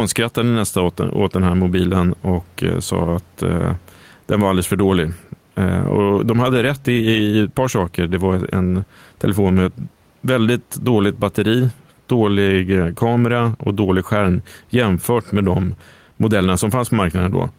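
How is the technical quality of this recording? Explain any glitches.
The speech has two problems: the level breathes, and there's a steady faint ticking under it.

Gain pumping runs throughout. The background swells in pauses and ducks by about 5 dB under loud syllables, likely gain set too high with a fast limiter clamping down.

Clock slip clicks run from 0.13 s to 17.52 s, roughly every half second. They're faint regular ticks where one sample gets dropped or repeated, likely from two unsynced clocks drifting around 40 ppm apart.

The room noise, sitting about 42 dB below the speech, is what you hear rising and falling with that pumping.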